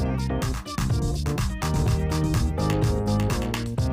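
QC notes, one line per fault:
1.75–3.33 s, doubled audio track: a full-band copy trails the sound by about half a second, roughly 5 dB quieter, starting and stopping abruptly. Unlike echo or reverb it has no decay or room colour. The likely cause is a slower second capture path or an edit holding two copies.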